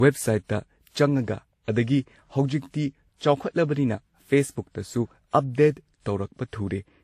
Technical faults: transcoding between lossy codecs

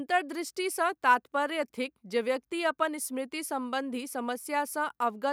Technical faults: none

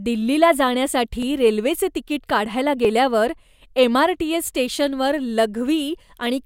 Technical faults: clock drift buffer slips

